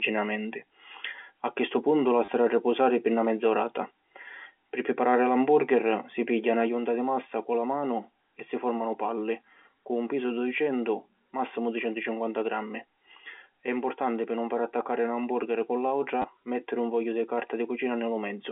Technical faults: packet loss with last packet repeated; sudden gain jump

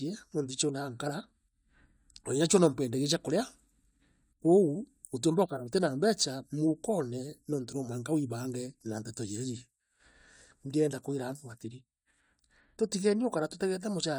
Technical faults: none

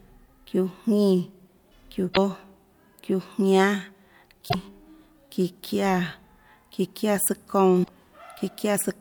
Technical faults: damaged data in a compressed stream

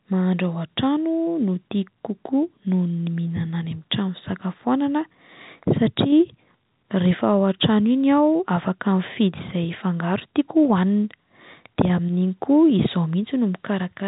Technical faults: none

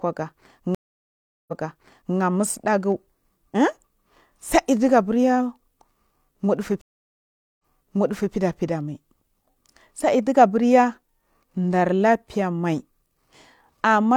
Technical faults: stream reconnect

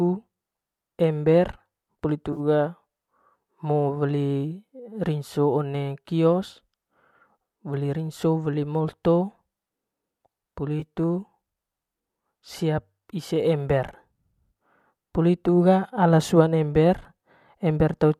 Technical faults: AAC frame loss with concealment

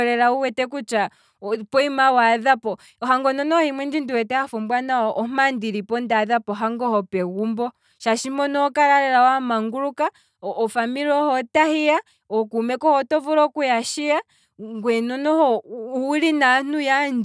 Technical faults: none

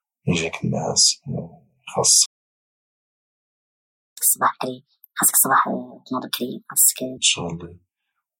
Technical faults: playback stall; catch-up at higher speed

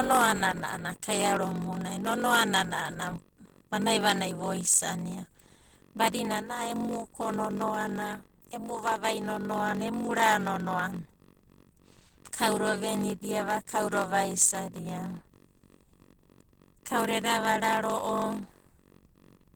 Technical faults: block size mismatch (padded); Opus voice compression

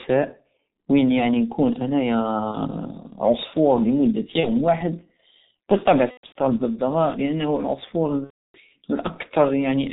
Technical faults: G.723.1 codec; VoIP packet loss concealed by the speech codec

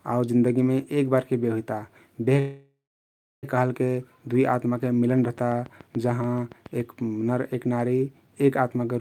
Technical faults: call audio freeze; train of clicks

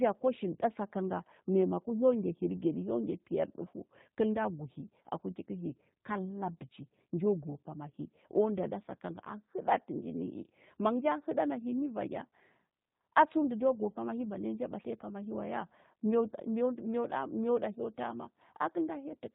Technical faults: G.729 codec

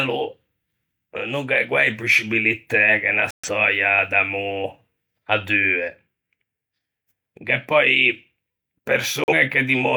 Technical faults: digital broadcast dropout

